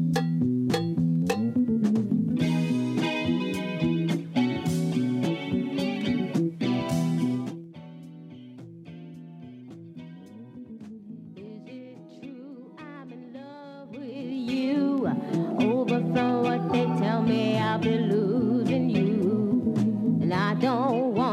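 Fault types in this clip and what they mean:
Zipper noise: the level shifts in unsmoothed 2 dB jumps, each leaving a click, so a fast ticking rides on a drop of about 20 dB near 7.34 s and a slower zipping on a similar rise near 13.82 s, unlike a click-free fade.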